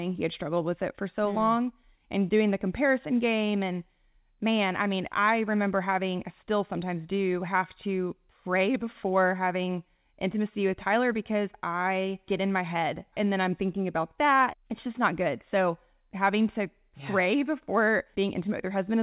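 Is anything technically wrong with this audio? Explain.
No, nothing is technically wrong: the speech comes over a G.711 mu-law call path at 64 kbps, which is why nothing is heard above 4 kHz, and the signal shows no faults.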